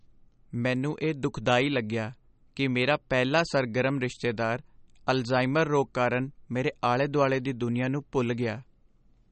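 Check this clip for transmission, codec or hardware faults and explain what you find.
MP3 compression artefacts run through the whole clip, from start to finish, and they are plainly audible. The sound has nothing above 8.4 kHz, where the encoder cut the treble to save bits. Weak frequency lines are dropped and return from frame to frame, so the speech takes on a watery, swirling texture, with metallic chirps on s sounds and smeared consonant attacks. The damage points to a low bitrate of roughly 40 kbps, and MP3 is the likely cause.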